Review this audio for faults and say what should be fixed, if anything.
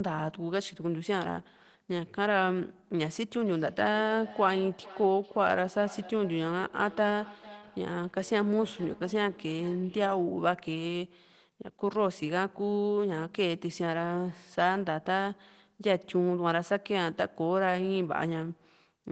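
From 3.46 to 10.45 s there's feedback echo between two devices. The speech comes back roughly every 400 ms, getting thinner and ringier each pass and peaking about 19 dB below the direct speech. A second device in the room is replaying the call into a microphone whose echo canceller can't account for that playback. To prevent it, have only one device per room join with audio, or put the other one on headphones and mute its microphone.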